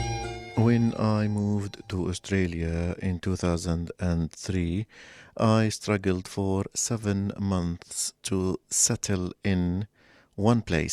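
No technical faults are audible at any point in the audio.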